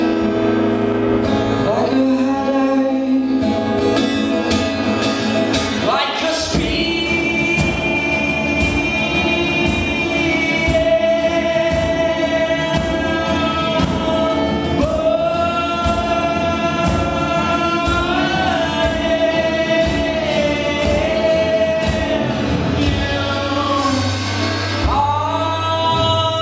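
Nothing stood out on listening to this recording.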